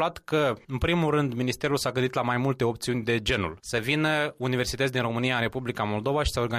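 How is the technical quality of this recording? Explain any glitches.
No glitches are audible: nothing drops out, clicks, stutters or distorts anywhere in the recording.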